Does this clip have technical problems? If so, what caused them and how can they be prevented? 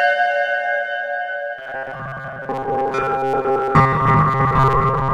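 Yes, from 1.59 s to the end it turns into robotic sound from repeated short buffers, a rigid 134 Hz buzz. Audio likely arrived too late, so roughly 7.5 ms chunks were repeated over most of that stretch. A steadier connection or bigger jitter buffer prevents it.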